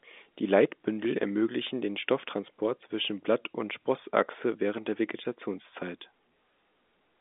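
Nothing technically wrong turns up in this speech recording, which comes across as ordinary telephone-coded audio with the narrow, roughly 250 Hz to 3.6 kHz band you'd expect from a phone line.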